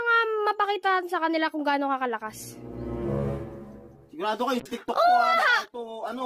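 From 4.6 s onward, a call bitrate drop, consistent with 64 falling to 16 kbps, leaves muffled, watery sound; the spectrogram's upper band goes dark.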